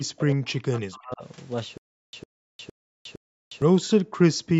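From 0.0 to 1.24 s, speech suppressed in double talk: the talker's level dips by about 40 dB in pieces over roughly a second. This is likely the echo canceller failing to tell near-end speech from loudspeaker echo while both sides spoke, and attenuating both.

From 1.78 to 3.62 s there is a stutter with silent gaps. A 105 ms burst repeats four times at a steady 461 ms period, each followed by 356 ms of digital silence. This points to a stalled stream replaying its last fragment on each retry, and the audio due in that span is lost.

At 4.42 to 4.55 s, the background is gated by the echo canceller. The room sound drops by about 40 dB for roughly 100 ms and then returns. The canceller clamped the microphone hard while the loudspeaker was active and released it afterwards.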